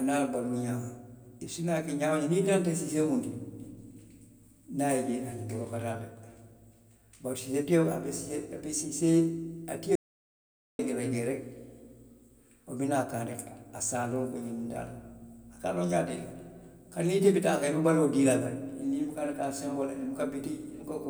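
At 9.95 s the speech drops out to dead silence until 10.79 s, so roughly 0.84 s is simply gone, with no room tone underneath. That's an audio dropout to silence, likely the input cutting out while the recorder kept writing silence.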